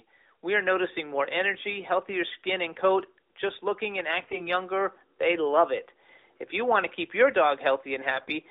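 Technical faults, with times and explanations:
4.20–4.48 s and 8.14–8.31 s, AMR bit errors: the first comes right after "coat just looking and". Pitch and level hold, but the speech turns hoarse, scratchy and gargly. Around 7 percent of the weakly protected bits in the 12.2 kbps AMR-NB stream arrive flipped, so the excitation pulses land in the wrong places and the fine pitch, gain and spectral values go wrong.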